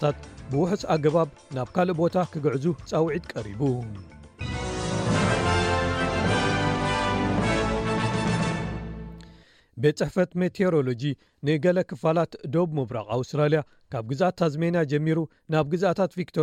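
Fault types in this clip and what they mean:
Nothing stands out here: no faults turn up anywhere in the clip.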